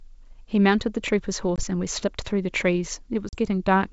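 Packet loss on an ADPCM call, at 1.56–1.63 s (20 ms lost) and 3.29–3.36 s (40 ms), throws the decoder out of step, leaving abrupt silent holes followed by slightly distorted speech that settles within tens of milliseconds.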